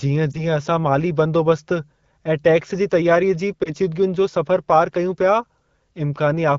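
Speech carried over AMR wideband, which sounds consistent with the 12.65 kbit/s mode, with lost AMR speech frames in two places. From 0.31 to 0.39 s, just before "असां माली बंदोबस्त ऐं", and from 3.63 to 3.74 s, between "टैक्स जी तयारीअ जी" and "जो सफ़रु पारि कयूं", a brief dip or warble fits a single 20 ms frame failing its checksum. The decoder stands in with the last good pitch and vocal-tract parameters at reduced gain, and the speech comes back weak or rough for a moment.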